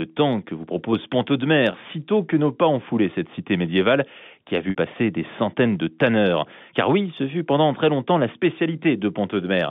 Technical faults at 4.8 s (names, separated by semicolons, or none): packet loss with pitch repetition